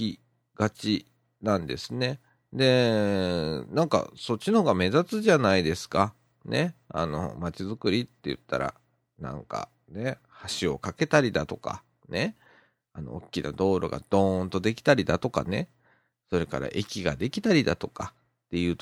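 No technical faults can be heard in this speech, so there is nothing to describe in time order.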